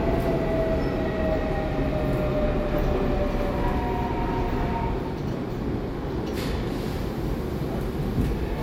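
No technical fault can be heard anywhere in this recording of sounds. Nothing in the recording or playback chain interrupts or disturbs the audio at any point.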